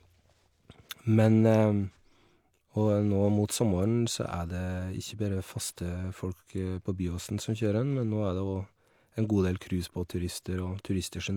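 Nothing in the speech recording points to a technical fault: the signal holds steady throughout, with no dropouts, distortion or other defects to report.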